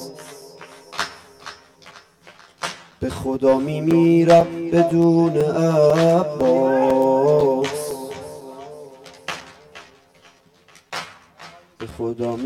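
From the start and running the whole way through, the audio carries channel delay (comb filtering). One channel arrives roughly 10 ms behind the other, and when the two are folded to mono, whatever they share cancels at a regular series of frequencies, the lowest at around 40 Hz. The result is a hollow, phasey tone. A spectrogram shows fixed horizontal notch bands, evenly spaced up the spectrum and unchanging over time.

From 0.42 s to 11.91 s there are periodic USB or driver dropouts, recurring every 0.5 s. Each time, a few milliseconds of audio vanish and are replaced by silence, which points to something blocking the audio path at a steady interval. They come through as a regular ticking or popping beneath the sound. On a waveform, each one is a hairline gap where the signal drops abruptly to silence, and on a spectrogram it is a thin vertical broadband stripe.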